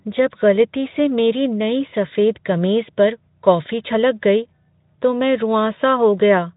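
No faults heard; the speech runs through a Speex-coded path with only light coding damage, and nothing drops, breaks up or glitches.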